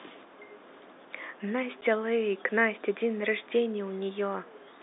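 Speech heard over a narrow telephone-band channel, consistent with G.711 coding, with one packet loss filled with silence at 1.81 s. A 10 ms hole, consistent with a single dropped packet, is replaced by silence, leaving hard edges. On a waveform it shows as a flat gap, and on a spectrogram as a thin vertical blank.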